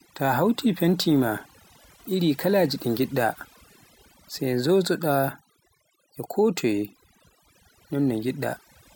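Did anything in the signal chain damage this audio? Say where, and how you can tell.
Yes: overdone noise removal in the processing stage, present throughout the speech. Gaps fall to near silence with twinkling specks as bands near the noise estimate are gated off. Unlike codec smearing, the damage tracks the noise floor, not bitrate.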